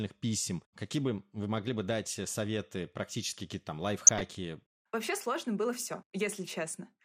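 Speech, dulled throughout by a gurgling, granular texture with upper sub-bands flickering out, the sound of likely MP2 compression at a low rate around 80 kbps. From 4.07 to 4.23 s, DAB burbling adds noise blips in single bands. This brief burst, from a small scattering of bit errors, sets it apart from the steady codec dullness.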